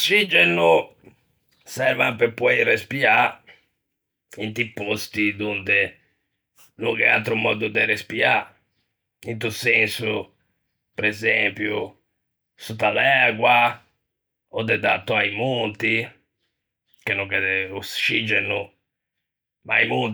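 No technical faults are audible.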